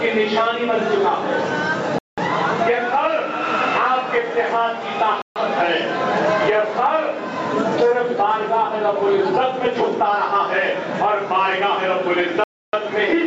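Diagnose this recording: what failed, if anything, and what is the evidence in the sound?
Gain pumping at the microphone input: throughout, the gain swings about 20 dB, ducking under each loud sound, likely from excessive gain hitting a fast limiter. Unlike a noise gate, it never falls fully silent.

Bluetooth stall at the playback link: clean silences of 190 ms at 1.99 s, 140 ms at 5.22 s and 290 ms at 12.44 s, then the sound resumes. This is likely interference draining the headphone buffer. The gaps are true silence rather than smeared concealment.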